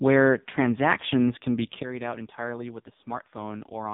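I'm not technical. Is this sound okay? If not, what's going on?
No. AMR narrowband mobile codec, throughout: the speech went through an old phone-network compressor squeezed very hard, so it sounds buzzy and robotic, with nothing above 3.8 kHz.

Sudden gain jump, at 1.83 s, just after "transactions can be": the volume abruptly drops and stays much quieter to the end, likely from a level setting changed instantly without fading.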